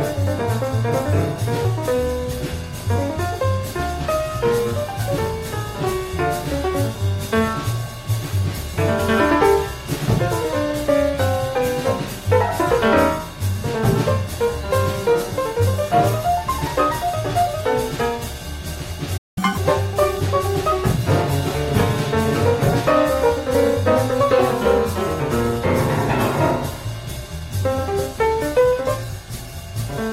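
At 19.17 s the sound cuts out abruptly in mid-flow and stays silent for about 192 ms, resuming at 19.38 s. This playback stall is likely the player running short of buffered data, or its output thread being briefly blocked, so nothing reached the output.

From 19.38 s to 19.57 s the audio runs at twice normal speed, with pitch raised by roughly ten semitones, before snapping back to normal. This catch-up at higher speed is the player resampling its backlog to recover the time lost in the stall.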